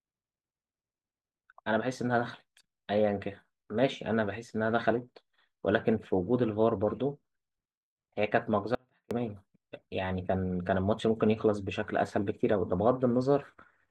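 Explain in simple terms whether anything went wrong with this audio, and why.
Something did go wrong: an audio dropout to a faint residue, from 8.75 to 9.11 seconds. For about a third of a second the speech suddenly drops away, leaving only a very faint sound far in the background, then snaps back. The likely cause is a brief break in the signal while the recording chain kept running. What sets it apart from a natural pause or a fade is the abrupt cut, and the gap isn't fully silent.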